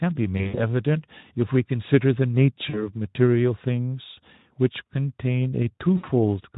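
From 0.38 to 0.70 s, at 2.69 to 2.95 s and at 5.97 to 6.05 s, VoIP packet loss concealed by the speech codec stretches the last pitch into a fading buzz. The spectrogram shows smeared, repeated harmonics; the waveform, shrinking periodic cycles before recovery.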